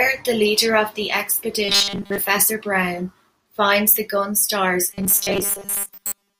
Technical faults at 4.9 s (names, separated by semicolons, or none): robotic sound from repeated short buffers